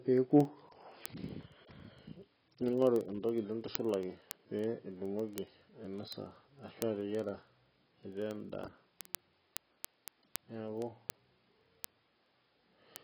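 From the first moment the speech sounds dull and heavily smeared, with nothing above about 5.5 kHz and a warbling, fizzy texture on sustained sounds and sibilants. The likely cause is heavy AAC compression, AAC-LC at a very low bitrate, in keeping with something near 16 kbps. To fit that budget the encoder has dropped its cut-off well down and quantised the remaining bands so coarsely that smearing is audible throughout.

Word clock ticks run from 0.13 s to 13.01 s: sharp clicks of uneven strength at a steady rate of about one every 50 ms, twenty a second, several hundred in all. A digital link is being read by a device on its own free-running clock, off from the sender's by roughly 500 parts per million. Each time the two clocks slip past each other, a single sample is dropped or repeated, producing one tick.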